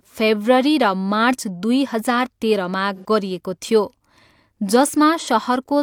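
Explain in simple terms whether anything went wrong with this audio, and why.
AAC frame loss with concealment occurred twice. Chunks of the compressed speech stream went missing, and the decoder patched each hole by reusing and reshaping the last sound it had received. From 2.95 to 3.05 s, just before "गरिएको थियो", about 85 ms is patched over, which fits two lost frames. That patch sounds briefly smeared and noisy. A shorter patch of about 43 ms follows at 5.19 to 5.27 s.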